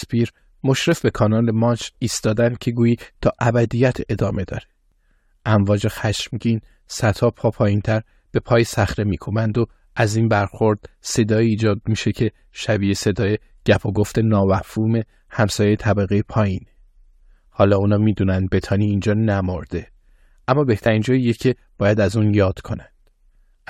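The clip is speech with two small jumps, one at 0.92 s and one at 4.92 s. Each is a click or tiny skip where a few milliseconds of sound go missing. The fault is an overlap between stream segments. The audio arrives in 2-second segments whose time stamps overlap slightly. The player trims the overlap, removing sound that was never duplicated. About 5 to 6 ms vanish each time, so the waveform jumps at the join.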